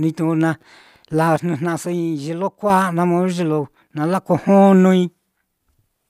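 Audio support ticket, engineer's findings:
Sudden gain jump, 1.36 s to 2.70 s: speech and background noise drop together by about 6 dB in a single step, then return at 2.70 s. Likely a digital gain change or bit shift applied without a ramp.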